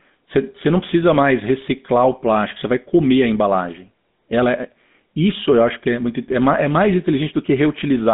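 Throughout, the GSM full-rate codec rebuilds the speech from sparse regular pulses. This makes it plainly buzzy and gravelly. Nothing passes above 3.8 kHz.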